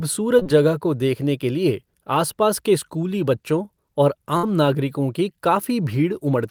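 At 0.39 s and again at 0.43 s, two short concealed packet losses occur back to back in the speech. Each time about 20 ms never arrived. The decoder extended the preceding sound, then blended back. Together they form a brief smear lasting to 0.47 s.

At 4.37 s a burst of packet loss removes about 60 ms. The receiver held the last sound and faded it, giving a short buzz or hiss until 4.45 s. Speech then resumes with that stretch missing.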